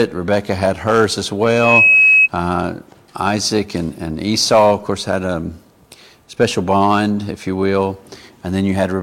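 Loudspeaker feedback squeal runs from 1.45 s to 2.28 s in this audio. A single tone near 2.6 kHz swells up over roughly a third of a second and settles at about 5 dB above the surrounding sound. A microphone is picking up the loudspeaker it feeds, and around 2.6 kHz the gain around that loop exceeds one, so the tone keeps reinforcing itself until the loop is broken and it stops.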